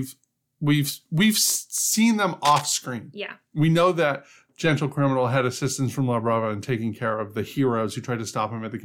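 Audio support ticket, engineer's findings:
Cable scratch noise, 2.45 to 2.62 s, just after "we've we've seen them". Dense, uneven crackle and rustle over the speech for under a fifth of a second, only a few dB below it. Likely cause: worn cable, connector or control moved, its contact resistance fluctuating fast and injecting noise bursts.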